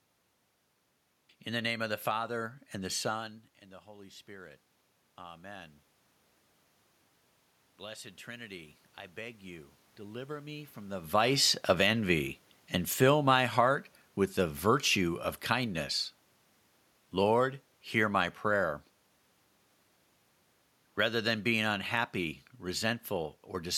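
From 7.77 to 11.15 s there's automatic gain rising: the AGC judged the input too quiet and crept up about 6 dB, so voice and room noise swell together.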